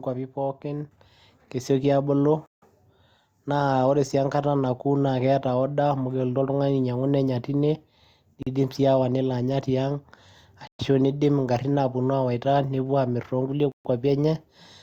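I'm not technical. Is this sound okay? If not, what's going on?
No. Microphone volume stepped up at 1.02 s: the call software decided the microphone was too quiet and turned its input up in a single jump, so the speech and the background noise suddenly get louder together at that moment.

Bluetooth stall at 2.46, 8.43, 10.67 and 13.72 s: the sound drops to silence for about 0.16, 0.04, 0.12 and 0.13 s, then carries on. This is likely radio interference delaying the wireless audio, so the headphones run out of sound until the missing pieces arrive.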